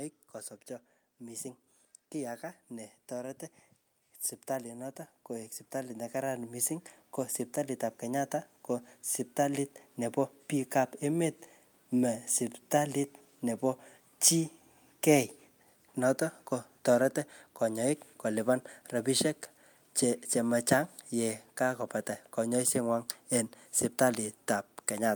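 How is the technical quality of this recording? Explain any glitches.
The recording has two episodes of automatic gain rising. From 1.22 to 3.47 s the level climbs by about 4 dB, and from 4.63 to 6.8 s by about 7 dB. In each, the gain control judged the input too quiet and raised its gain over roughly two seconds, so the speech and the background noise swell together. On a waveform the envelope widens steadily, and a spectrogram brightens evenly across all frequencies, including the noise floor between phrases.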